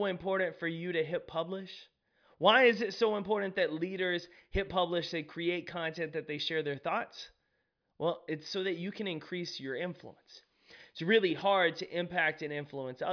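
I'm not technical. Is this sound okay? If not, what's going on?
Yes, no problems to report.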